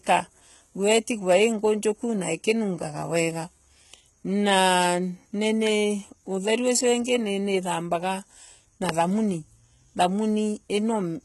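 Throughout the speech there is heavy damage consistent with HE-AAC compression at a low bitrate, likely around 16 kbps. The treble is rebuilt from copied lower bands, so s sounds turn gritty and lispy. A spectrogram shows repeated, smeared upper bands and nothing above 11.8 kHz.

Loud pops at 4.84 s, 5.67 s and 8.89 s sound like sharp single clicks over the speech, which continues underneath. The likely cause is a brief voltage spike. On the waveform each is a narrow spike, roughly 15 dB above the signal at the first two and about 20 dB at the third.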